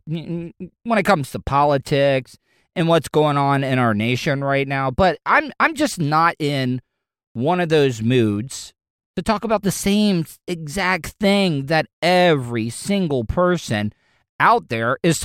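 No dropouts, clipping, distortion or timing errors are audible anywhere in the speech.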